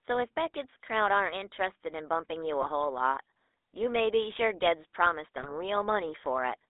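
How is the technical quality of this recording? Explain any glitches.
The recording has clear technical faults. It has a telephone quality, and two short bursts of corruption break into it.

The GSM full-rate codec colours the whole clip. The band runs only from about 300 Hz to 3.7 kHz, which fits a 13 kbps GSM call. The codec rebuilds the voice from a vocal-tract model and a sparse pulse excitation. That gives a plainly audible buzzy, gravelly roughness.

GSM bit errors strike from 2.62 to 2.69 s and again from 5.38 to 5.54 s. Corrupted bits reached the decoder, which then rebuilt some frames with wrong filter, pitch or gain values. The speech breaks into squawks and gargling pops. The second burst lasts longer, so it damages several consecutive frames.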